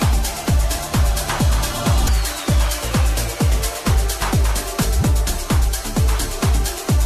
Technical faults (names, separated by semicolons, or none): damaged data in a compressed stream